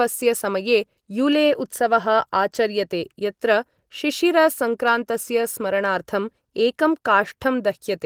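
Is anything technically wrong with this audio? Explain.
No, nothing in this speech recording stood out as a technical problem on listening.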